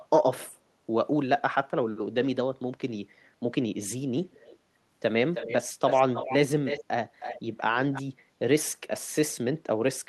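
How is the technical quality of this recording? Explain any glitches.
The recording has audible echo leak. Delayed copies of the speech surface at 4.31–4.57 s, 5.34–5.55 s, 5.89–6.36 s, 6.65–6.84 s, 7.20–7.41 s and 7.92–8.02 s, trailing the speech by 317 ms. They are very faint at first and grow fairly strong near 6.7 s. This is likely a loudspeaker echo the far end's canceller didn't fully remove. On a spectrogram, the speech's harmonic pattern is repeated faintly, shifted right by that delay.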